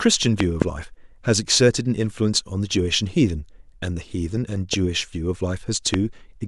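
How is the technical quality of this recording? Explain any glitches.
The recording has four loud pops breaking into the speech. A double loud pop at 0.40 to 0.64 s, then single pops at 4.73 to 4.76 s and 5.94 to 5.96 s, about 20, 10 and 20 dB above the speech. Each is a sharp thump over the continuing speech, likely a voltage spike from a plug, switch or static discharge.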